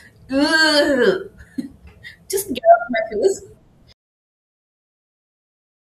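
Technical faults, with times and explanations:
3.93 s to the end, audio dropout to silence: the speech cuts off mid-flow and never returns. The last two seconds are silence, with no room tone, hiss or breath. That total absence points to lost input rather than a quiet passage. The likely cause is a device or link dropping out while the recorder kept writing silence. Whatever was said after the cut is not in the file.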